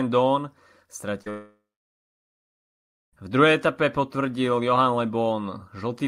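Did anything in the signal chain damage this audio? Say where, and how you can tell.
Yes. Short concealed packet loss at 1.22 to 1.27 s, a network fault: about 40 ms of speech arrived too late for the decoder, and the receiver filled the gap by extending the preceding sound, heard as a brief smear before the real signal resumes.

Long network dropout from 1.30 to 3.14 s: about 1.8 s of speech is missing. A short synthetic continuation fades out and leaves roughly 1.5 s of silence before the audio returns, with the lost part gone. The likely cause is a stall in the network path.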